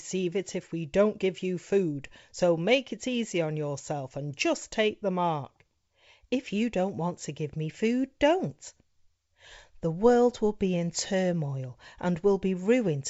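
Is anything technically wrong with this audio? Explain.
No, nothing in this speech clip is technically wrong. It has passed through G.722 wideband telephone coding at 64 kbit/s, which keeps the sound up to about 7 kHz and leaves at most a faint hiss in the upper band.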